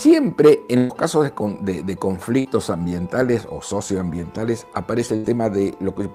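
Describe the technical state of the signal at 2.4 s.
A burst of packet loss runs from 2.39 to 2.47 s. The receiver stretches the last sound for about 53 ms and fades it, then resumes with roughly 60 ms skipped.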